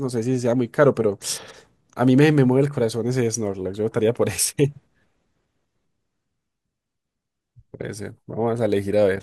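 No technical faults can be heard anywhere in this speech recording.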